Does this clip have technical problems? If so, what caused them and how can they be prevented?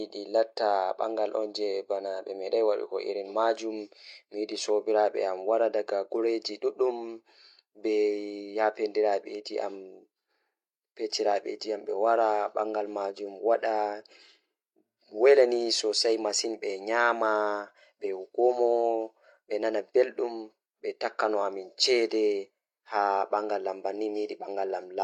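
No technical problems are audible.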